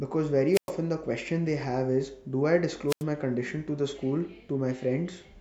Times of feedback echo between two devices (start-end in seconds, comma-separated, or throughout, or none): none